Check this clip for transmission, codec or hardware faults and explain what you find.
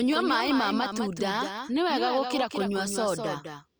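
One fault runs through the whole clip: a doubled audio track. A second, somewhat quieter copy of the speech trails about a fifth of a second behind, with no decay. It was likely captured twice or misaligned in editing.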